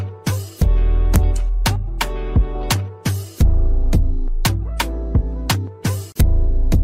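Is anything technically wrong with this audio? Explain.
Yes. Integer overflow cracks appear at 1.16 s, 1.66 to 2.02 s, 2.71 s, 4.45 to 4.81 s, 5.5 s and 6.2 s. Loud peaks pushed only about 0 to 1 dB past full scale wrap to the opposite extreme instead of being limited, so each overshoot becomes a violent crack, harsher than clipping. On a waveform, peaks jump from top rail to bottom rail. A spectrogram shows full-band vertical streaks at those times.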